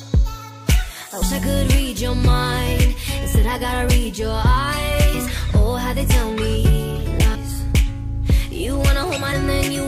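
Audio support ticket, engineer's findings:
Damaged data in a compressed stream. Three brief glitches at 1.21 s, 7.34 s and 9.31 s. Component: decoder input. Corrupted bytes make the decoder misread frames, lose sync and hunt for the next frame header. Each glitch lasts under 20 ms.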